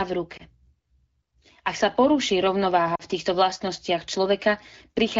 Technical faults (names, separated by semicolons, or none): lost AMR speech frames